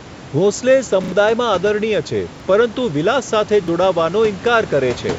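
Short stutters at 1.04 to 1.12 s (heard three times), 2.36 s and 3.64 s: a repeated buffer, replayed when audio arrived late, fitting a 40 ms buffer.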